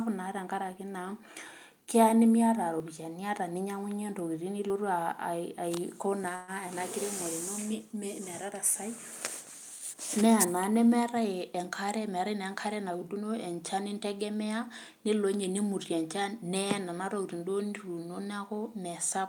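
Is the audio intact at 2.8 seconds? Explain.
No, there's a break at 2.8 s. You hear a small jump in the speech, with no gap of silence, just the sound skipping ahead by roughly 20 ms. That's most likely a dropped buffer (overrun): the software didn't read its samples before the hardware overwrote them, so that chunk was lost and the audio on either side got spliced straight together.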